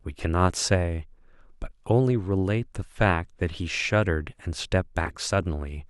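At 5.05 to 5.16 s a corrupt frame decoded: damaged bits across several frames were played anyway, misplacing energy in frequency and producing a brief chirp or burst of noise peaking near -15 dBFS.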